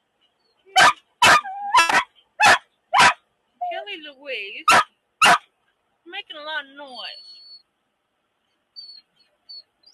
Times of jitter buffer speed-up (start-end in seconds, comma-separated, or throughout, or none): 7.61-8.55